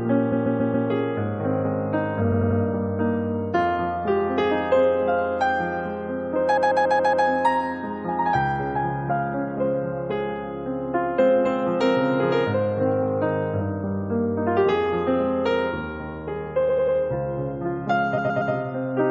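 Repeated frames stutter at 0.31, 2.31, 6.56, 16.68 and 18.17 s. Blocks of 93 to 139 ms replay three to five times, showing as identical tiled spectrogram slices.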